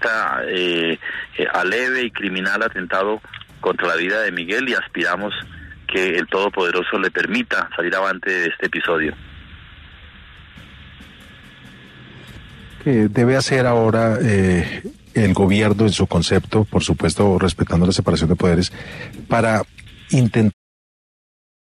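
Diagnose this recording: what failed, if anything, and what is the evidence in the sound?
Nothing here sounds like a failure to me; the only thing worth a mention is the smooth fade-out that begins around 20.5 s and settles at 20.54 s, which is just an ordinary editorial fade with no click or hard edge.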